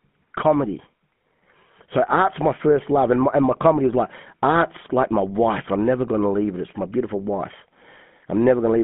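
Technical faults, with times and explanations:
throughout: channel delay (comb filtering). One channel arrives roughly 0.1 ms late, which fits a delay of about four samples, and summing to mono cancels shared content at evenly spaced frequencies starting near 5 kHz, giving a phasey colour. A spectrogram shows fixed horizontal notch gaps that never move.
throughout: GSM full-rate codec. The speech passes through the 13 kbit/s full-rate coder and a 150 Hz to 3.5 kHz line band, and its pulse-driven vocal-tract model leaves plainly audible buzzy, gravelly roughness. A spectrogram shows a hard ceiling at 3.5 kHz and little below 150 Hz.
3.52 to 3.59 s: GSM bit errors. Right after "and my and my" and before "is like art's like", flipped bits corrupt the decoder's filter, pitch or gain values for about 70 ms, which fits three 20 ms frames at roughly 1% bit errors. The waveform or spectrogram shows a brief burst of distorted spectrum or level.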